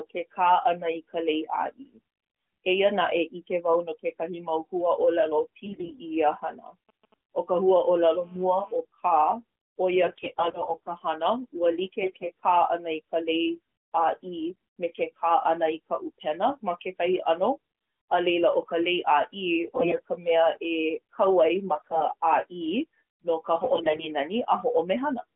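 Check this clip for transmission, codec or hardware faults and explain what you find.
The speech carries three kinds of fault: AMR bit errors, GSM signalling bursts and GSM phone buzz. The band stops near 3.4 kHz, as expected for narrowband AMR, and the light coding texture fits a high rate near 12.2 kbps.

AMR bit errors occur at 5.66–6.00 s, 10.04–10.96 s, 12.02–12.32 s, 19.66–20.01 s, 21.76–22.14 s just after "ai ma", and 23.56–24.08 s just after "no ka". Weakly protected bits flip while the frames still pass the check. Pulse positions and fine gain and spectrum values go wrong. Pitch and level roughly hold, but the voice turns hoarse and gargly.

GSM signalling bursts run from 6.89 to 7.85 s. A nearby 2G phone sends short groups of radio bursts while signalling. The audio circuit rectifies them. The result is a faint, galloping dit-dit-dit of brief 217 Hz buzzes, sitting well below the speech.

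GSM phone buzz follows directly, from 7.85 to 8.76 s. The phone now transmits steadily, as in a call, at 217 bursts per second. The rectified pulses give a steady, raspy 217 Hz buzz rich in harmonics. It sits about 30 dB under the speech and is unrelated to it.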